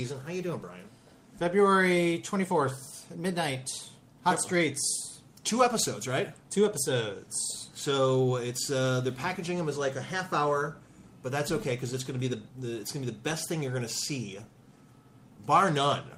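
Nothing stands out here: from the first moment to the last, no dropouts, glitches or other technical faults can be heard.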